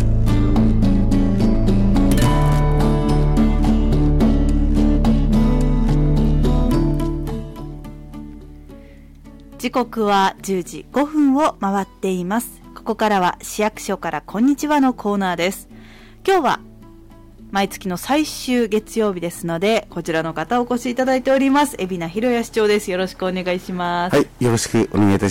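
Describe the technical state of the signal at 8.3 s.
Hard clipping is present at 8.3 s and across the whole clip. The signal arrives at some stage about 12 dB hotter than that stage can pass, so every peak above its ceiling is sliced flat, with something like 7 percent of samples pinned at the limit. Those squared-off tops generate harmonics reaching high into the spectrum, and with overload this heavy the result is a harsh, gritty fuzz riding on every loud moment rather than occasional crackle.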